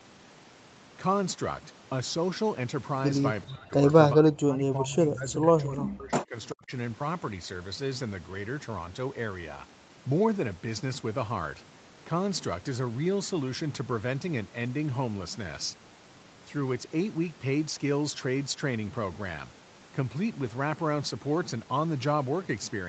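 The speech drops away at 3.45 to 3.75 s, 4.15 to 6.36 s and 6.52 to 6.72 s. It falls by roughly 35 to 40 dB. This is speech suppressed in double talk, likely an echo canceller muting its own talker.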